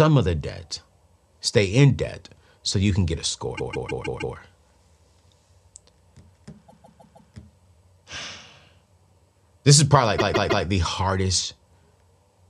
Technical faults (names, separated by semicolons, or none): repeated frames